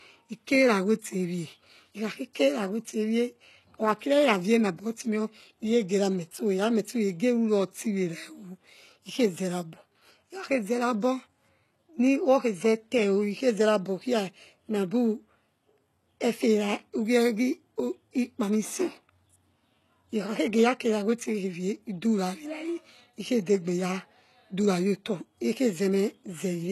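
Throughout the speech, plainly audible HE-AAC compression damage, likely from a low bitrate around 16 kbps, rebuilds treble from copied lower bands, making s sounds gritty and lispy. A spectrogram shows a hard ceiling at 12.3 kHz and blocky, repeated-looking upper-band texture.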